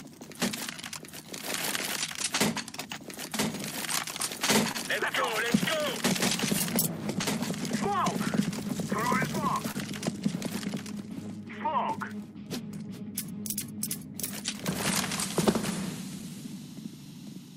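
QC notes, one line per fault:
Throughout: clock drift between sender and receiver. The sending clock runs slow, roughly 1.5 percent behind the receiving one. Audio arrives a little slower than it is played out, so the jitter buffer keeps draining. The receiver must keep padding the stream to stay in step. The result is a faint, recurring unsteadiness in timing across the whole clip, rather than any single obvious break.
0.04 to 17.06 s: repeated timing corrections. To cover the slow sender, the receiver keeps repeating short pieces of audio. Playback runs at about 99 percent speed overall. Roughly a fifth of a second is added across the stretch. Every edit lengthens the sound, never shortens it. The edits are small and unevenly spaced. They come across as slight hiccups and a gently uneven tempo.
4.72 to 4.77 s and 9.71 to 9.76 s: short stall from a late packet. At each point a packet was not in place when due, and the buffer ran empty. 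The receiver held the last sound for 29 ms until the packet arrived, then carried on from the same spot. Nothing is lost. A sound is briefly drawn out, with a faint buzz or dip, and timing shifts later by 29 ms.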